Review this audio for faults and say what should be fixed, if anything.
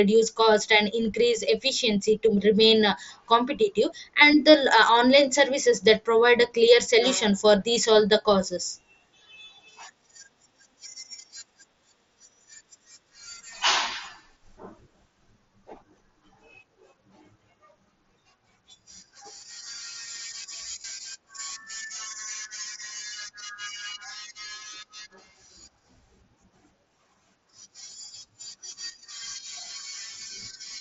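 There's some concealed Bluetooth headset packet loss. Tiny gaps at 7.75 s, just before "all the causes", and 22.34 s are nearly hidden. The 20.82–20.84 s run, which fits three lost frames, gets filled with repeated recent waveform and buzzes briefly. To prevent it, keep the headset close to the phone with a clear line of sight and less 2.4 GHz congestion nearby.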